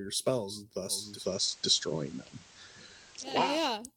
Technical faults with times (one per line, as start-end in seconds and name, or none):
0.86-3.62 digital radio blending to analogue